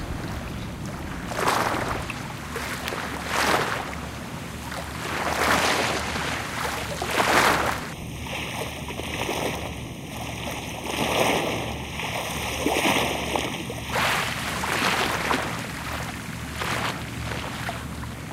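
From 7.93 to 13.93 s the sound turns hollow and phasey. This is channel delay (comb filtering): one channel lags the other by about a third of a millisecond before the mono sum, cutting evenly spaced notches from around 1.5 kHz up. Unlike a phaser's sweep, the notches stay fixed.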